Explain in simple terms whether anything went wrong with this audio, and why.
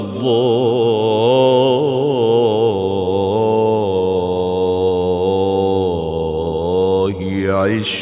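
Nothing went wrong with this audio that a listener can pick out. Listening through it, no moment stands out as a problem.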